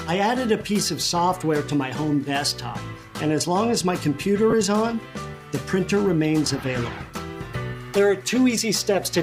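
Lost LE Audio frames break the Bluetooth LE Audio link from 4.50 to 4.53 s, a gap of 22.5 ms that fits three lost 7.5 ms frames. With no data arriving, the LC3 decoder conceals the hole by reusing the last good spectrum with randomised signs, so instead of a dropout the audio briefly turns into a noisy smear of its preceding content. The lossy compression along the path leaves only light codec damage.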